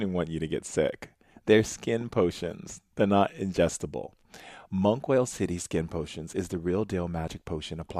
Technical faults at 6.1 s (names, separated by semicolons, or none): none